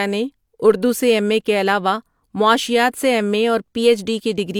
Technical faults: none

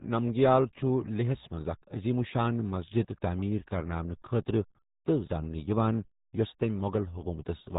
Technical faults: RealAudio 14.4 codec

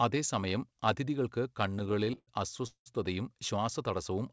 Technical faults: repeated stalls (stutter)

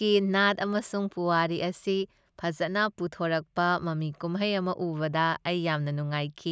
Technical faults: none

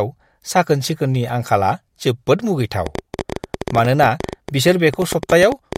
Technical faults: train of clicks

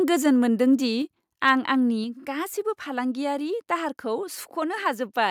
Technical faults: microphone overload; microphone volume stepped down

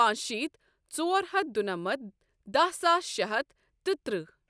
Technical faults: none

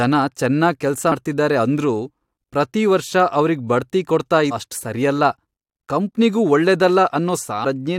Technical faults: damaged data in a compressed stream

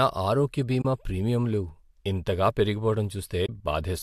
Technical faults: AAC frame loss with muting

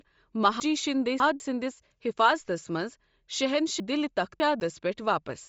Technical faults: Bluetooth LC3 compression; chunks out of order

